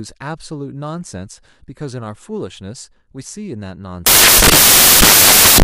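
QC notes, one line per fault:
4.06 to 5.64 s, samples built from the wrong bytes: the speech turns into loud, harsh broadband noise to the end. Misassembled bytes make low bits dominate each value.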